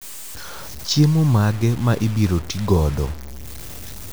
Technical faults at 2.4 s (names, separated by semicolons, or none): low bit depth without dither